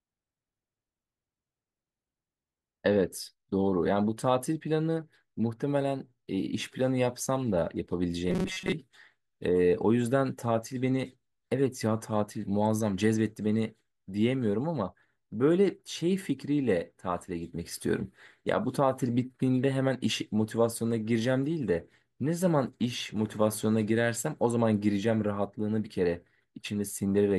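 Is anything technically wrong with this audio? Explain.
Yes. From 8.30 to 8.72 s, the speech becomes robotic sound from repeated short buffers, a rigid metallic buzz at 188 Hz. The likely cause is starved playback looping a chunk of about 5.3 ms for most of that stretch. Spectrograms show flat harmonics spaced 188 Hz apart, and the waveform shows identical repeating cycles.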